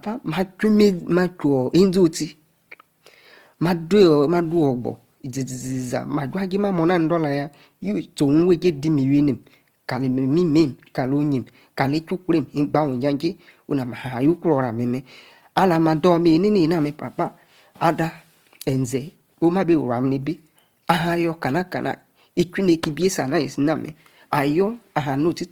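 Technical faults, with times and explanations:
Throughout: Opus compression. The speech was likely encoded with Opus in its music (CELT) mode at a low rate, about what 24 kbps would give. With too few bits, the encoder keeps each band's overall energy but rebuilds much of the fine detail by copying lower bands or filling with noise. Voiced sounds turn grainy and rough rather than swirly. The damage is plainly audible, though the bandwidth stays full, reaching about 20.2 kHz.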